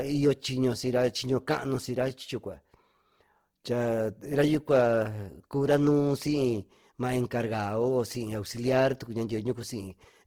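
Throughout, the speech sounds plainly grainy and rough rather than swirly like MP3, likely Opus compression near 16 kbps filling thin bands with noise while keeping treble to 20.4 kHz.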